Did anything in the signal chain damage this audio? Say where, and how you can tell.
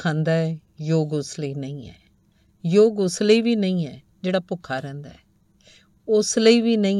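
No, nothing along the chain audibly damaged this recording, and the signal keeps its continuity and level with no disturbance attributable to any stage.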